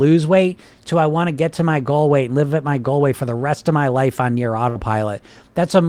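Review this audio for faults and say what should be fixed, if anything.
A burst of packet loss hit at 4.69 to 4.78 s. Several consecutive packets never arrived in time, so the receiver stretched the last sound for 58 ms, fading it into a held buzz or hiss, then jumped ahead, leaving 60 ms of speech missing. Forward error correction or redundant packets, together with a deeper jitter buffer, would let the receiver rebuild short losses like this instead of concealing them.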